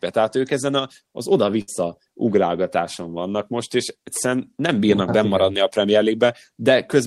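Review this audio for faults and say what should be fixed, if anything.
There's a burst of packet loss at 1.61 to 1.70 s, right after "ők ezen a az" and just before "ugrálgatáson vannak most és". A run of packets never arrived in time, so the receiver stretched the last bit of sound for roughly 60 ms, fading it down, then picked up again with about 60 ms of speech simply gone. Giving the jitter buffer more headroom and adding forward error correction or redundancy on the link would cover a gap this short.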